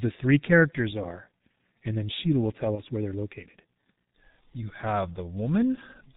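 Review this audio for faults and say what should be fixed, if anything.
Throughout, the speech is heavily muffled and hoarse, with smeared consonants and no content above 4 kHz. This is G.723.1 codec damage: its 30 ms frames and slowly updated voice model fit the 6.3 kbit/s mode, discarding detail.

Between 2.75 and 2.80 s, after "will tell" and before "where they're located", the sound briefly stretches and fades. This is VoIP packet loss concealed by the speech codec. About 30 ms, one frame's worth, went missing, and the decoder extrapolated from its last pitch and filter state.

To prevent both, use a wideband, higher-bitrate codec and a network path with jitter buffering or forward error correction so that packets arrive intact.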